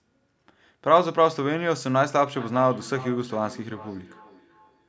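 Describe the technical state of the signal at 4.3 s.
At 4.3 s, feedback echo between two devices is present, from 2.35 s to the end. A second device replays the speech, which re-enters the microphone. Thin, ringing repeats return roughly every 0.4 s, about 18 dB below the speech.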